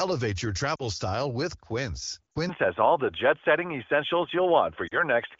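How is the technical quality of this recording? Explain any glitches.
The recording has two distinct faults: three brief dropouts from lost AMR speech frames, and a lasting drop in bandwidth partway through, heard against light AMR wideband (HD Voice) coding.

Lost AMR speech frames occur at 0.75–0.83 s, 2.33–2.38 s and 4.87–4.96 s. Each time, two corrupted frames, about 40 ms of speech, were concealed by reusing the last good pitch and vocal tract settings with falling gain. The result is a brief drop to near silence, with the voice coming back weak or rough for a moment.

At 2.49 s the input was likely switched to a poorer device. From then on the speech is dull and boxy, with nothing above 3.5 kHz, a level change of a few decibels, and faint new background noise. There is no silence at the switch. Unlike the momentary dropouts, this change persists to the end.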